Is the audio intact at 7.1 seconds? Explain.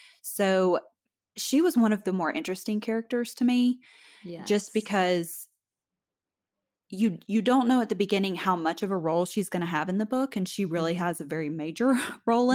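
No. Around 7.01 to 7.07 s, just before "you don't know at", a lost packet was rebuilt from error correction. A low-bitrate copy carried in the next packet filled about 40 ms, which fits two lost packets. So there's no gap, but the speech turns briefly rougher and noisier.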